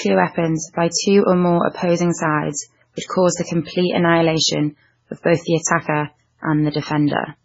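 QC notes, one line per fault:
Throughout, MP3 compression: the speech is dull, with nothing above 7.6 kHz, and heavily watery and swirly as quiet detail flickers in and out between frames. It's likely an encoder starved of bits, which fits a very low bitrate around 16 kbps.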